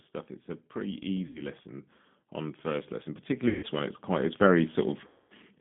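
A speech recording that sounds thin, rough and slightly synthetic throughout, confined to about 150 Hz to 3.4 kHz, which points to the 8 kbit/s G.729 codec rebuilding the voice from a coarse vocal tract model. From 0.72 to 1.61 s, and again from 2.34 to 4.8 s, voice and background swell together by about 4 dB and then about 7 dB: automatic gain rising, as the gain control judged the input too quiet. At 1.27–1.43 s, 3.49–3.66 s and 5.08–5.33 s the voice smears into a buzzy tone or coloured noise that fades, and stays weak or distorted afterwards. This is VoIP packet loss concealed by the speech codec, covering roughly 80 ms, 140 ms and 220 ms of missing audio.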